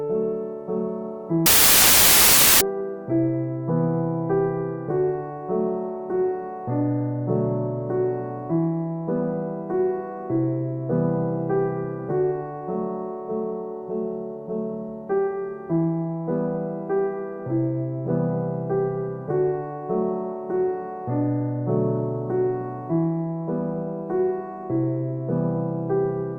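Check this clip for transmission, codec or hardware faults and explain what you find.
One fault stands out. From 1.46 to 2.61 s the audio turns into loud, harsh broadband noise. These are samples built from the wrong bytes: each value is reassembled misaligned or byte-swapped, so its rapidly changing low bits land in the most significant position.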